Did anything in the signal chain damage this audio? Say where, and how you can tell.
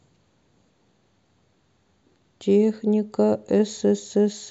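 No, nothing in the signal chain damaged this audio.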